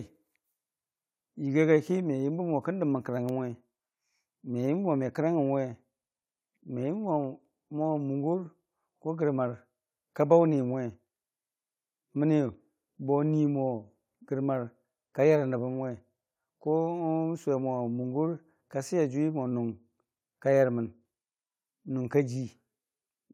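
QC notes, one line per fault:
No faults found in the speech. Nothing in it calls for a QC entry.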